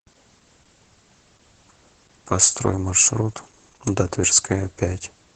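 Heavy Opus voice compression runs throughout: SILK coding, which fits about 10 kbps, cuts speech off at 8 kHz, sounding muffled and hoarse. Spectrograms show a hard ceiling.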